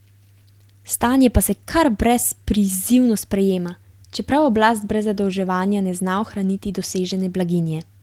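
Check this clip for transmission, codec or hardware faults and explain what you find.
Nothing turned up here: the speech comes across steady and intact throughout, with no transmission, codec or hardware trouble to point to.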